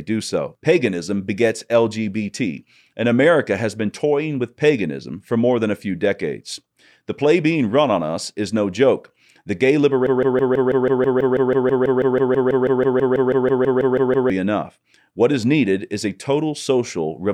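At about 10.07 s the speech locks into a broken-record loop: one 163 ms fragment repeats 26 times, back to back, until 14.3 s, giving a stutter. The player or stream likely stalled and kept resending it, so the audio for those four seconds is lost.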